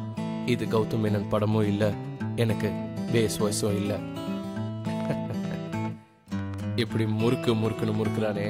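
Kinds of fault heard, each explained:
Train of clicks: From 4.85 s to the end, about fifteen similar clicks arrive unevenly, roughly four per second, poking above the sound. Likely interference or a faulty connection or power supply.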